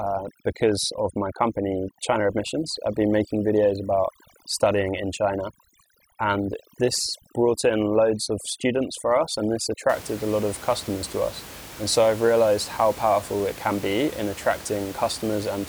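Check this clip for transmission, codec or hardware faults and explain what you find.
One fault stands out, confined to the opening stretch. From 0.0 to 9.9 s, just before "a lot of customers", the gaps fall to near silence sprinkled with twinkling specks. This is overdone noise removal. A suppressor set too aggressively drove individual frequency bands down whenever they came close to its noise estimate. That stripped the quieter parts of the speech along with the room noise, which otherwise sits about 17 dB below the speech.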